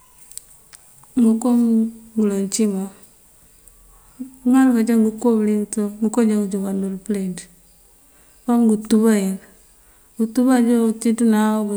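No technical faults can be heard anywhere in the speech recording, so there is nothing to place on a timeline.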